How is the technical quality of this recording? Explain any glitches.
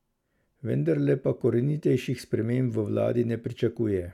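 The technical quality of this recording is sound, with no glitches to explain.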